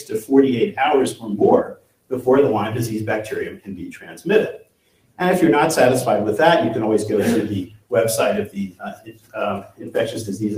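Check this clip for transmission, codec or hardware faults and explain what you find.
Two faults show up, both caused by processing rather than by transmission or hardware.

Noise suppressor applied to music or sounds: a suppressor tuned for speech stays engaged throughout and mistakes wanted sound for noise. Its gain swings by around 15 dB, so the audio pumps and thins.

Sound cut by the noise suppressor: at 0.00–0.31, 1.13–1.28, 1.64–2.12, 3.50–4.26, 4.57–5.19, 7.65–7.92, 8.46–9.35 and 9.61–9.90 s the suppressor clamps harder. The sound sinks by about 12 to 17 dB, with the deepest dips at 1.64, 4.57 and 7.65 s.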